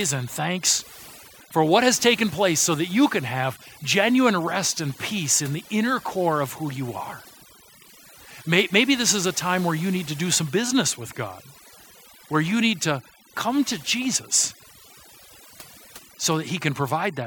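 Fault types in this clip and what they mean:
Overdone noise removal: the denoiser was pushed too hard across the whole speech clip, so frequency bands near its noise estimate get pulled way down or shut off. Gaps go nearly silent with little twinkly specks, and the voice loses its quieter detail.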